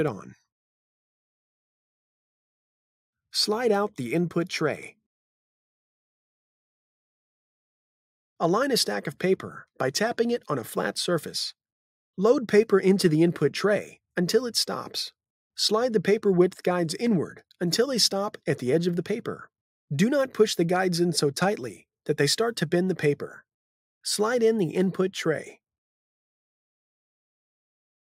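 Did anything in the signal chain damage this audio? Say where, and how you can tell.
No, nothing along the chain left a mark I can hear, so there's no stage to point to here.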